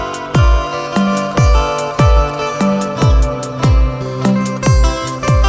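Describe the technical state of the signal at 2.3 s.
At 2.3 s the signal is intact, with no dropout, glitch or other fault, only the call path's normal coding, which leaves nothing above 8 kHz.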